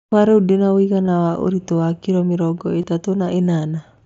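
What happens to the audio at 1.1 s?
At about 1.07 s there is a brief concealed Bluetooth headset packet loss. About 15 ms of audio vanished, and the receiver patched it by repeating recent waveform, so a short buzzy tone takes its place, with a small warble where real audio returns.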